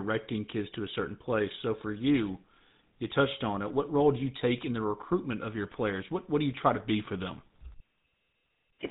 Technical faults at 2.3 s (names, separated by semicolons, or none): GSM full-rate codec